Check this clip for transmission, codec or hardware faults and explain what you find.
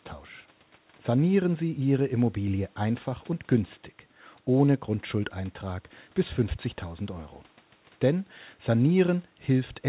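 Nothing faulty found: the speech comes through a call path with no content above 4 kHz, which fits narrowband G.711 A-law at 64 kbps, and that band limit is simply how that codec works.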